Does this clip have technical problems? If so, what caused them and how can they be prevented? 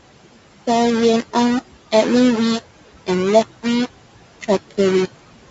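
Yes. Low bit depth without dither runs through the whole clip: the speech carries a coarse, grainy distortion that shifts with every syllable, and quiet tails sputter or drop abruptly to silence. The likely cause is that the audio was rounded down to about 4 bits with no dither, so the error tracks the signal and sits only around ten decibels below the speech. To prevent it, keep at least 16-bit resolution throughout and add dither whenever reducing bit depth.

Noise suppressor artifacts are also present from start to finish. The suppressor pulls down the bands it treats as steady noise by about 17 dB, frame by frame, so the room noise sinks in the pauses and swells back beneath the speech. That room noise sits about 17 dB below the speech, and the band-limiting to 8 kHz comes from call microphone processing. To prevent the artifacts, reduce room noise at the source and use milder suppression settings.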